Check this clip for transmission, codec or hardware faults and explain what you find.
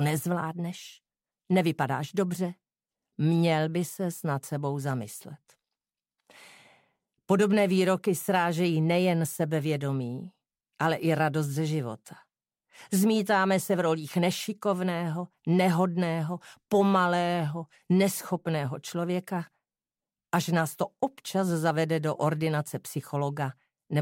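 No faults can be heard anywhere in the clip. Close listening turns up nothing that needs explaining.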